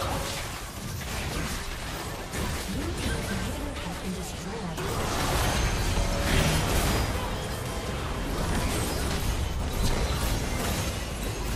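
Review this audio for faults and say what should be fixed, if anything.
MP2 compression damage runs throughout: the sound is dull and gurgling, likely from low-rate Layer II coding, consistent with about 80 kbps, with upper sub-bands flickering off as ragged gaps on a spectrogram. Encode at a higher bitrate or use a more efficient codec.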